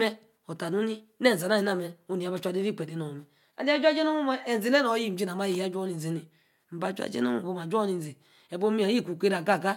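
No technical faults can be heard anywhere in the signal of this speech recording.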